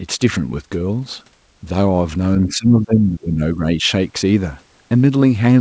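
Speech suppressed in double talk, from 2.46 to 3.88 s: the voice dips unevenly, falling by roughly 20 dB at its deepest and thinning or dropping out in pieces for around a second in all. The likely cause is an echo canceller that could not separate the near talker from loudspeaker echo while both sides spoke, so it pulled down everything. The audio is band-limited to 8 kHz throughout, which fits a wideband G.722 call path.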